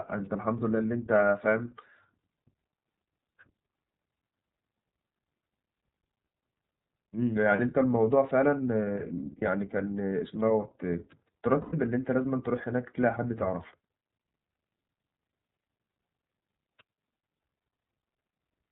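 Throughout, the speech has passed through the iLBC codec. It codes each frame's excitation independently and discards everything above 4 kHz. The frame structure fits iLBC's 30 ms mode at roughly 13.3 kbps. The result is plainly audible: a narrowband, boxy sound with a slightly rough, synthetic edge on every syllable and no upper sibilance or air.

Frames of iLBC were lost at three points: around 7.56 to 7.60 s and 9.38 to 9.43 s (about 30 ms each), then 11.61 to 11.75 s (about 120 ms). At each gap the decoder filled the hole by repeating the last pitch cycle blended with noise. The two short ones come across as brief buzzy blips. The longer one at 11.6 s is a held, breathy vowel that fades before the speech snaps back cleanly. Each iLBC frame decodes on its own, so there is no lingering smear afterwards.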